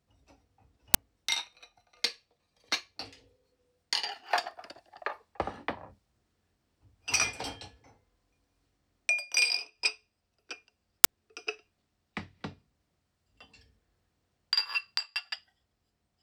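At 0.94 s and again at 11.04 s, a brief, harsh burst of digital noise cuts into the sound, each lasting about 10 ms. This is an uninitialised buffer: a 10 ms block was sent to the output before any audio had been written into it, so whatever leftover memory sat there was played as samples. Unlike a dropout click or a clipped peak, the burst bears no relation to the surrounding audio and is simply loud, unrelated noise.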